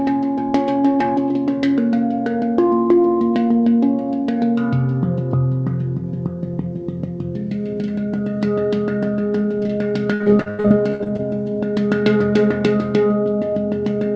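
From 10.14 to 11.21 s, repeated packet loss produced ten gaps, the longest 86 ms, each filled by extending the last sound. With about a third of that span concealed, the audio turns choppy and robotic, all within a band ending at 8 kHz, which fits a G.722 call codec.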